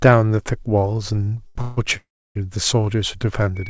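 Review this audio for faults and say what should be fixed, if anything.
Short stalls from a late packet occur at 1.24–1.29 s and 1.47–1.57 s. A packet missed its slot, the jitter buffer emptied, and the receiver held the last sound for 30 ms and then 85 ms before resuming exactly where it left off. Unlike a freeze, these are brief held sounds with a slight buzz or dip rather than a fading gap. A deeper adaptive jitter buffer would prevent them.

Call audio freezes run from 1.61 to 1.79 s and from 1.97 to 2.37 s. The receiver stretched the last sound into a fading buzz or hiss for 156 ms and then 384 ms, the longer one sinking to about 310 ms of silence, likely because packets were held up in transit. The length and the fade to quiet set them apart from the short stalls. Fixing network congestion or prioritising call traffic would prevent them.

A loudspeaker feedback squeal begins at 3.55 s and lasts until the clip ends. 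A single 2.3 kHz tone swells over roughly 0.7 s to about 10 dB above the speech, because the microphone is picking up its own loudspeaker with loop gain above one. Its steady single pitch distinguishes it from codec hiss or buzz. Headphones, echo cancellation, or lower speaker volume would prevent it.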